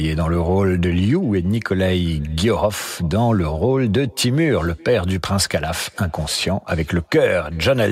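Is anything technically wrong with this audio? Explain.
Yes. Throughout the speech there is echo with no canceller: the far end plays the call over a loudspeaker, its microphone recaptures it, and nothing subtracts it. Each phrase returns around 400 ms later as a faint, thin copy about 29 dB below the original.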